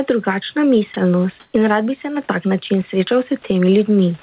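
From 1.4 to 1.54 s, likely comfort noise in place of the background: featureless hiss shifted about 6 dB, a smooth, textureless spectrogram band.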